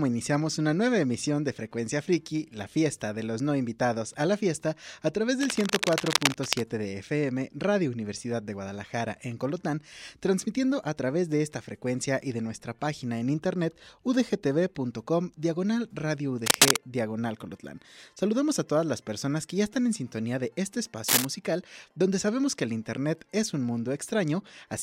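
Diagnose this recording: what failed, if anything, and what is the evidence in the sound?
Cable scratch noise at 5.40–6.62 s, 16.46–16.76 s and 21.08–21.25 s: rough bursts at or above the signal level in the analogue wiring, likely a worn connector's contact resistance fluctuating as it moves.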